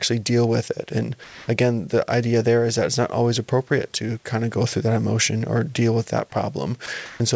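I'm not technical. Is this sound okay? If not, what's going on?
No. Sound dropped by the voice detector, from 1.24 to 1.48 s just before "again the idea there" and at 6.86 s after "or deal with that": the sound briefly gives way to steady hiss, likely because the call's speech detector mistook part of the sound for background and stopped sending.

Comfort noise in place of the background, from 7.06 to 7.20 s: the real room sound is swapped for a flat hiss at a different level, likely filler noise the receiving end invents while nothing is being sent.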